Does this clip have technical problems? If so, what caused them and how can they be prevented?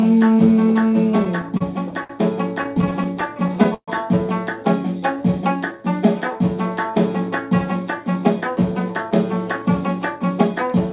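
Yes. Repeated stalls (stutter) at 1.2 to 2.11 s and 2.63 to 3.9 s: packets arrived late, the jitter buffer kept running dry, and the receiver stretched the last sound through short gaps of up to 131 ms. Nothing is lost, but the audio drags. A steadier network path or a slightly deeper jitter buffer would prevent it.

Jitter buffer slow-down from 5.0 to 6.06 s: the buffer was running low, so it repeated small slices, adding about 81 ms and playing at 93% speed with the same pitch. A larger starting buffer target would avoid it.

Jitter buffer speed-up at 7.99 to 8.64 s (106%) and 9.62 to 10.8 s (104%): the buffer held too much audio after a backlog, so it trimmed tiny pieces, roughly 50 ms each time. More even packet delivery would prevent the backlog.

The band-limit at 4 kHz is just the narrowband call path, which fits a G.711-style link.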